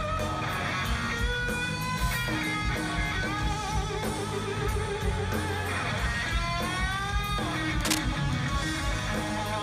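At 7.81 s, a burst of cable scratch noise cuts in for about 0.17 s, ending at 7.98 s. It sounds like a brief scratching rustle over the audio, roughly as loud as the sound itself. The likely cause is a worn cable, connector or control being moved.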